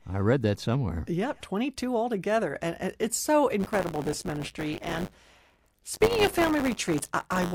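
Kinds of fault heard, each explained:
Buffer tearing: From about 3.59 s to the end, the speech takes on a steady robotic buzz at 100 Hz, present only while sound is playing. The writer filling the ring buffer and the hardware reading it have drifted out of step and cross inside each 10 ms period. Roughly a tenth of every buffer holds audio about 20 ms stale, and the hard joins on either side repeat at the buffer rate.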